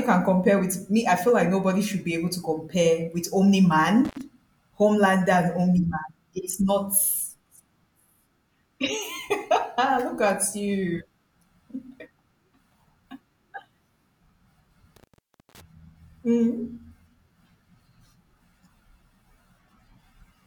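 At 4.05 to 4.21 s, and again at 14.96 to 15.61 s, the speech cuts out through an intermittent contact: a loose cable or plug briefly opens the line. The first break lasts about 72 ms, the second about 513 ms. Each gap is bracketed by scratchy crackle as the contact makes and breaks, with faint hiss beneath, which separates it from a clean digital dropout that falls to true silence with sharp edges.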